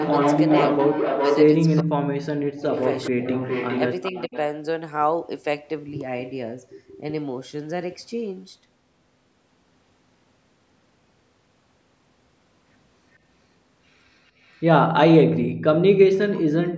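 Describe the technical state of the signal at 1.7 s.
At 1.7 s the far end's echo canceller has likely let part of its loudspeaker pickup slip back into the call, producing an echo leak from 1.66 to 1.82 s. A faint, delayed copy of the speech, lagging by about 411 ms and sitting roughly 20 dB under the direct signal, surfaces as a brief scrap layered beneath the talker, audible as a ghostly repeat of sound from four tenths of a second earlier.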